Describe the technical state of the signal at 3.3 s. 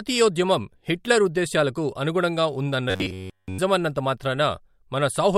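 At 3.3 s the system is likely starving for new audio and looping one short buffer of about 10.7 ms, so the span from 2.90 to 3.59 s carries robotic sound from repeated short buffers: essentially all repeated material, a rigid metallic buzz at 93.8 Hz loosely tracing the speech.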